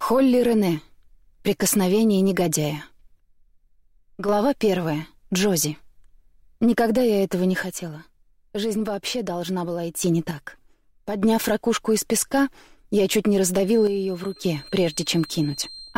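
From 3.2 to 4.29 s the level falls abruptly by about 6 dB and then returns. The same drop recurs from 7.63 to 10.03 s, from 10.31 to 11.22 s and from 13.87 to 14.44 s. This is one channel dropping out, likely a stereo channel being lost before the mono sum. Its step-like edges and fixed depth set it apart from a fade or from gain riding.

From 13.58 s to the end, a thin, steady whistle at 4.2 kHz sits well below the main sound and swells and fades slowly in level. This is a feedback whistle, likely a speaker-to-microphone loop held just at the edge of feedback. It differs from runaway howl because it never builds into a howl. It differs from a fixed electrical tone because its level drifts.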